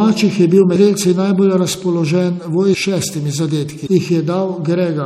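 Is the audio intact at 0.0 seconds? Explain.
No. From the very start, the speech sounds watery and swirly, with s sounds turning metallic and chirpy, and this damage runs through the whole clip. The likely cause is MP3 compression at a starved bitrate, which fits around 64 kbps. Short of bits, the encoder drops weak spectral lines that flicker on and off between frames, producing that unstable, smeared texture.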